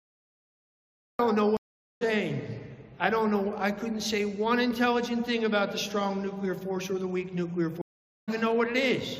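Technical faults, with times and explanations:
0.0–1.19 s, cut-off start: capture began late, so the clip opens on digital silence and then enters abruptly mid-sound at 1.19 s, with no natural attack.
1.57–2.03 s and 7.82–8.29 s, stream reconnect: the connection dropped and a fresh decoder restarted, leaving gaps of 442 ms and 461 ms. Playback then resumes roughly 0.3 s and 0.5 s further on, skipping material.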